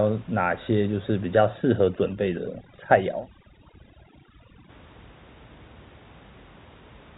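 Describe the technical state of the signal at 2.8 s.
At 2.8 s the signal sits inside a stretch of overdone noise removal running from 1.44 to 4.69 s. The suppressor pushes frequency bands near its noise estimate almost to zero, taking quiet speech detail with them, so the background drops and breaks up into twinkling specks.

Just before that, from 2.76 to 2.78 s, there is packet loss with pitch repetition. A single 20 ms gap was concealed by repeating the last pitch period, so it comes across as a brief held, slightly buzzy tone before normal speech resumes.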